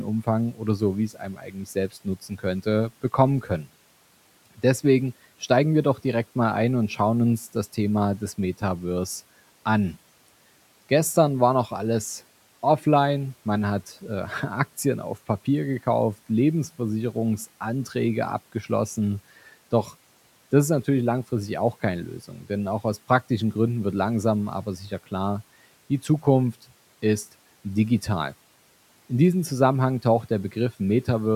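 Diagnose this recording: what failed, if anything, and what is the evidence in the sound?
The call-processing noise suppressor misjudged parts of the speech as noise and attenuated them along with the background. Between 1.14 and 2.44 s, roughly half a second of speech is pulled down, by about 11 dB at the deepest point, so consonants and word endings sound swallowed. A shorter dip at 3.42 to 3.67 s takes about a tenth of a second down by about 8 dB. The room noise, about 28 dB below the speech, is what the suppressor was targeting.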